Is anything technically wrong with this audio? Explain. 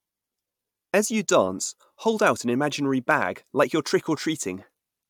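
No, nothing in this speech recording stood out as a technical problem on listening.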